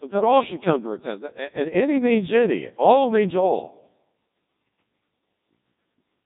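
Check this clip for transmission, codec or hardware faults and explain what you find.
One fault runs through the whole clip. It is the Codec 2 vocoder, and it is heavy. The speech arrives as synthesised sine waves from pitch, voicing and envelope alone. It sounds robotic and buzzy, with nothing above 3.8 kHz, and the rate is 1.2 kbit/s.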